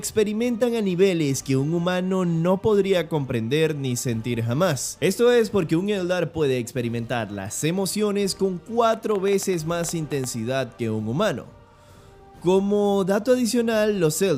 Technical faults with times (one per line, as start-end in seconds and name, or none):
8.89-10.25 train of clicks